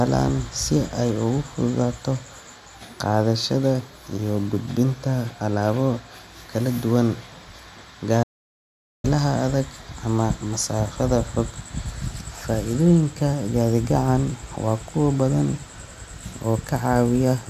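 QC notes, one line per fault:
8.23–9.04 s: audio dropout to silence. The speech cuts off into silence with no room tone for about 0.81 s, resuming at "adag ama"; likely a lost input link.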